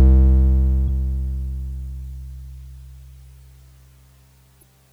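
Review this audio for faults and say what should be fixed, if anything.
Damaged data in a compressed stream breaks the music at 0.85–0.89 s and again at 4.59–4.63 s, each a blip of about 40 ms. Corrupted bytes in those frames make the decoder misread them and lose sync until it finds a valid frame header. On a spectrogram each shows as a short broadband smear; the waveform shows a brief discontinuity. Verifying frame checksums and resending or concealing bad frames would prevent it.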